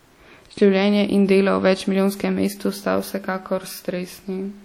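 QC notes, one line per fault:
Throughout, WMA compression: the speech likely went through a WMA encoder at a rate pointing to about 48 kbps. Long transform blocks smear quantisation noise and drop weak detail, giving plainly audible ringing and a washy hiss that breathes with the speech. Nothing sounds above 19.3 kHz.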